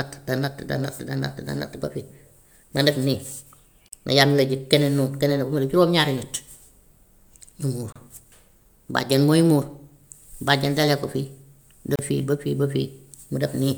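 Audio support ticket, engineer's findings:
Gap at a join of encoded pieces, 3.88 to 3.92 s (about 40 ms), 7.92 to 7.96 s (32 ms), 11.96 to 11.99 s (32 ms). Regular 4 s spacing, so the speech was probably encoded in 4 s segments and concatenated untrimmed. Encoder start delay plus last-frame padding kept at each join. Abrupt silence in continuous speech with smeared edges, then resumes where it stopped. Fix: trim priming and padding before joining.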